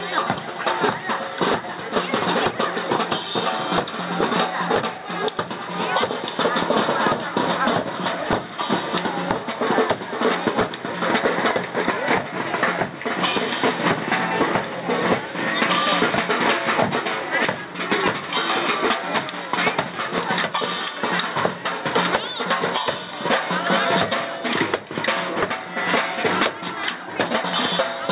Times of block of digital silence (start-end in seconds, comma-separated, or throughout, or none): none